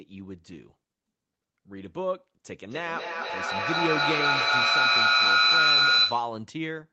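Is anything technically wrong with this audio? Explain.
Yes, there's a feedback howl from 2.71 s to 6.41 s. Two devices in the same room are on the call, so the far end's loudspeaker gets picked up by the near microphone and sent back round, gaining level each trip. The repeats narrow onto a tone somewhere near 4 kHz and grow until it peaks at about 9 dB above the speech, pulsing roughly every fifth of a second as it circulates, before stopping once the loop is broken.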